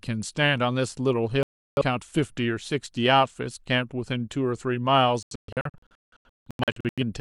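A digital broadcast dropout occurs twice, as the receiver loses frames and mutes: a single gap from 1.43 to 1.82 s, then scattered short holes from 5.23 to 7.03 s, the longest about 0.17 s.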